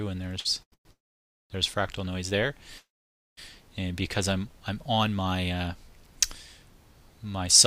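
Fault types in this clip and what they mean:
Short stall from a late packet: a late packet let the jitter buffer run dry, so the sound is held for 55 ms and 90 ms, delaying playback without loss.
Call audio freeze: likely held-up packets; the last sound is continued briefly, then falls silent for about 0.09, 0.54 and 0.53 s before resuming where it stopped.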